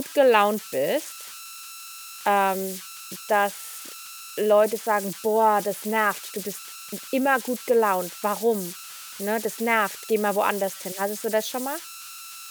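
Converter idle tones run through the whole speech clip. An undithered delta-sigma converter settles into repeating bit patterns when the input is small. Here they form tones around 1.5 kHz in pauses. They also leave grainy noise about 16 dB below the speech.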